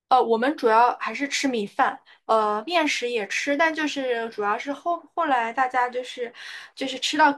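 No technical faults are audible.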